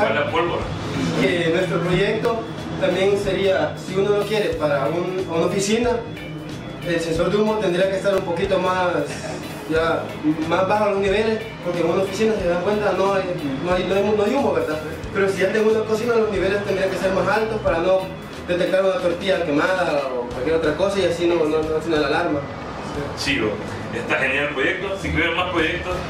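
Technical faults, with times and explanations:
1.23–1.25, 2.25, 3.24, 4.22, 7.19 and 8.18 s: overlap between stream segments. Successive 1-second segments carried timestamps that overlapped, so the player discarded between 6 and 21 ms of audio that was never duplicated, and each splice jumps the waveform, heard as a click or tiny skip near each second boundary.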